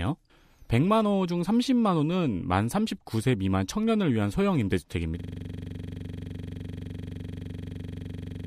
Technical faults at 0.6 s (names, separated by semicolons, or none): none